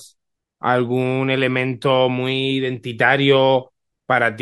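Nothing in the speech stood out as a technical problem on listening.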